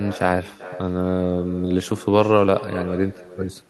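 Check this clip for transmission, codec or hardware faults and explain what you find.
One fault runs through the whole speech clip: echo with no canceller. Every phrase returns roughly four tenths of a second later as a separate, quieter copy, about 16 dB down, thinner than the original. The far end is playing the call through a loudspeaker, its microphone picks that playback up, and nothing subtracts it before it travels back. Unlike room reverberation, which smears into a smooth tail, this is a distinct, delayed repeat.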